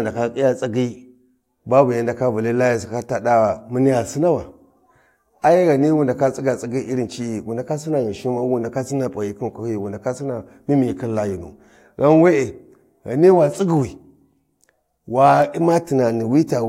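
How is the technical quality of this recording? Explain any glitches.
No glitches turn up anywhere in this recording, so there's nothing to explain.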